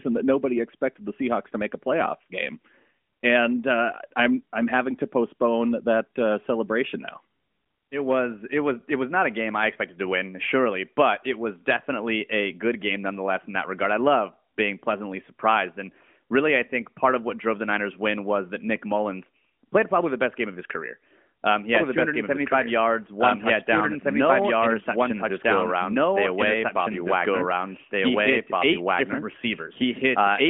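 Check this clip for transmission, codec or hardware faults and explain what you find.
One fault is audible: a doubled audio track. From 21.75 s to the end, a second full-band copy of the speech runs about two seconds behind at roughly equal level, with no decay or room colour, starting abruptly. The likely cause is a second, slower capture path mixed back in. The whole clip is narrowband, with nothing above 3.6 kHz, consistent with AMR-NB at 12.2 kbps.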